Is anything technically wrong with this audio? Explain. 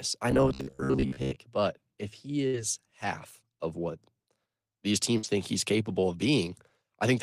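Yes. Two kinds of fault can be heard in this speech clip.

From 0.31 to 1.38 s there is robotic sound from repeated short buffers, most likely because audio arrived too seldom and the playback kept replaying its last short slice, about half of it repeated material. The repeats impose a buzz near 66.8 Hz, which fits a buffer of roughly 15 ms. A spectrogram shows rigid, evenly spaced horizontal lines at multiples of 66.8 Hz, and the waveform shows identical cycles repeating.

There are two bursts of packet loss. From 2.47 to 2.56 s, 61 ms is filled by continuing the last sound before playback resumes with about 60 ms of speech missing. From 5.17 to 5.26 s, 55 ms is filled and about 60 ms is missing. Each fill is heard as a brief held, fading sound followed by a skip. On a spectrogram this looks like a smeared, static band that dims and then cuts to a sudden onset. The waveform envelope decays and then jumps back.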